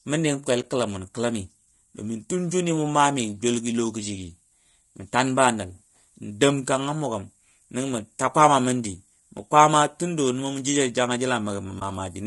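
From the start the speech has a rough, grainy quality, with a hiss filling in between the harmonics and a top end that sounds thin and a bit synthetic. That's likely low-delay AAC compression, the AAC-ELD kind you get on video calls, running at something like 32 kbps. Its short frames can't pin down the pitch harmonics cleanly, and at that rate there aren't enough bits to cover the gaps, so the damage is plainly audible the whole way through.

On top of that there are two brief holes, one at about 0.61 s lasting roughly 30 ms and another at about 11.79 s of similar length. Each one is AAC frame loss with muting. A chunk of coded audio went missing, which sounds like a single lost frame of about 20 ms, and the decoder just zeroed it. The overlapping windows smear that into a soft fade out and back in, so you get a quick gap with rounded edges.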